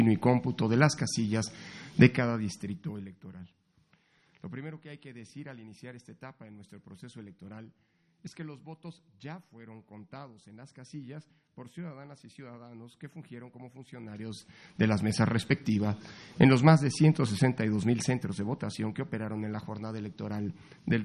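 From 2.07 to 3.22 s, zipper noise: the level falls by roughly 20 dB in about 1 dB jumps, some twenty a second, each jump ticking audibly. The waveform envelope shows a staircase, and the spectrogram shows faint vertical broadband lines at each step. It happens again, rising by around 20 dB, from 13.89 to 15.10 s, then falling by around 10 dB at a slower seven or so ticks a second from 17.34 to 18.89 s.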